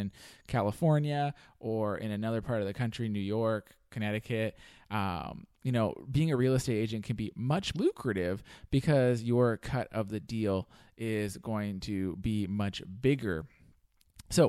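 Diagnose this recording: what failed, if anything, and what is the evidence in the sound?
The failure is in the codec stage: damaged data in a compressed stream. From 7.72 to 7.76 s the speech breaks with a brief glitch lasting about 40 ms. Corrupted bytes made the decoder misread the frames there, lose sync, and hunt for the next valid frame header before clean decoding resumed. A network packet loss would be concealed, sounding more like a smeared or faded gap.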